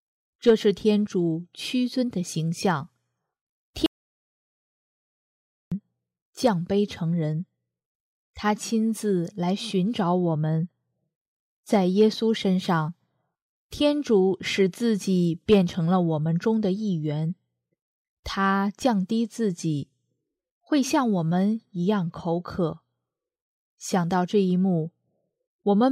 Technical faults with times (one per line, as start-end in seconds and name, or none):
3.86-5.72 audio dropout to silence